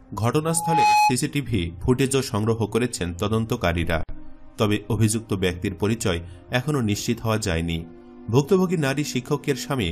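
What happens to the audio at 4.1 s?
At 4.03 s a gap at a join of encoded pieces opens, lasting 56 ms until 4.09 s: the encoder's start-up silence and last-frame padding were left in where two separately encoded pieces meet. The sound drops out abruptly, then resumes where it stopped. The waveform shows a flat run, the spectrogram a thin blank column with slightly smeared edges.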